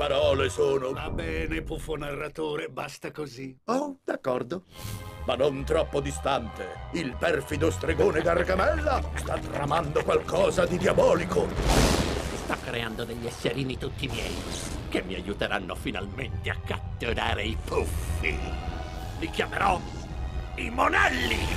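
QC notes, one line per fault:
Throughout, overlap-add ripple: badly overlapped frames swing level about 6 dB near 100 Hz, a steady metallic buzz, unlike slower, program-driven gain pumping.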